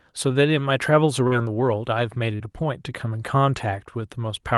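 Speech with two brief smeared wobbles, at 1.27 to 1.34 s and 2.35 to 2.42 s. Each is short concealed packet loss: about 40 ms of audio arrived too late for the decoder, which extended the preceding sound to bridge the gap before blending back into the real signal.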